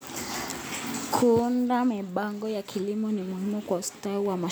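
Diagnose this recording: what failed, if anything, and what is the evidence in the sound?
Listening to the speech recording, nothing stood out at any stage of the chain.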